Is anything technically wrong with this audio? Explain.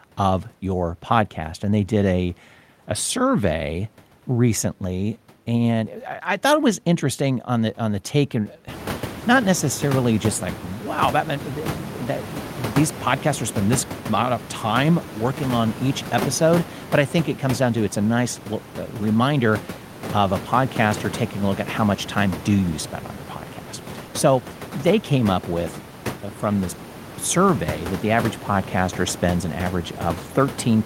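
No, nothing is technically wrong with this audio.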